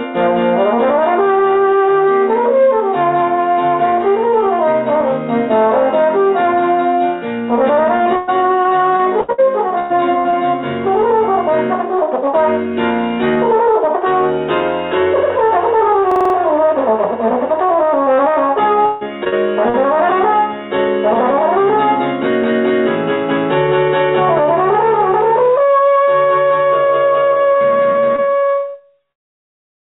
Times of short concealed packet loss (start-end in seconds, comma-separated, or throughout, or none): 19.24-19.34, 19.70-19.76